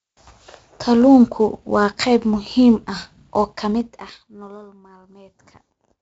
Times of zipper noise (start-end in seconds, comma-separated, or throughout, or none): 3.53-4.74